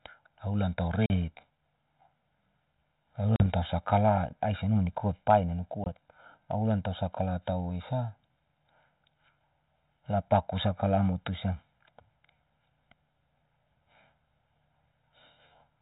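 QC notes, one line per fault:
Throughout: channel delay (comb filtering). One channel runs roughly 1.5 ms behind the other, and when the two are summed to mono the shared content cancels at evenly spaced frequencies. The first notch sits around 400 Hz, with further notches repeating up the band at regular intervals. That fixed series of holes gives the speech a hollow, phasey colour that never moves. The light coding of the line, which fits G.726 at 32 kbit/s, sits underneath this without adding to it.
1.06 s to 1.11 s, 3.36 s to 3.46 s and 5.84 s to 5.88 s: packet loss on an ADPCM call. The first two gaps drop about 40 ms of audio each and the third about 20 ms, which points to two, two and one lost packets. Each loss is filled with silence, leaving a hard-edged hole. The decoder's adaptive predictor and step size then no longer match the sender's. Speech returns slightly distorted, and it settles within some tens of milliseconds.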